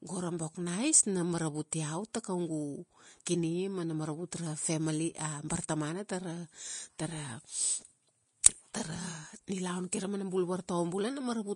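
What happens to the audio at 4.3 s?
At 4.3 s the speech has the same hissy, grainy texture it has for the whole clip. Nothing sounds above about 10.5 kHz. The damage plainly points to Vorbis compression at a low bitrate, likely near 33 kbps. Treble detail is quantised so coarsely it turns to noise, roughening tones and blurring attacks.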